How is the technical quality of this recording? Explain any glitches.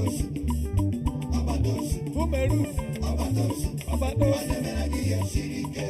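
The quality is compromised by one fault heard throughout. Channel delay (comb filtering): one channel lags by under half a millisecond, and mono summing cancels evenly spaced frequencies. The first notch falls near 1.5 kHz, leaving the sound hollow and phasey.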